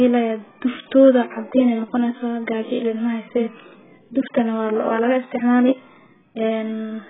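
From start to finish the speech sounds dull and smeared, with a warbling, fizzy texture on sustained vowels and sibilants. This is heavy damage from AAC compression, likely AAC-LC at a very low bitrate, which fits roughly 8 kbps. Starved of bits, the encoder discards everything above 3.8 kHz and quantises the remaining bands coarsely. On a spectrogram, energy stops at a hard ceiling near 3.8 kHz, with patchy holes and blurred, blocky texture below it.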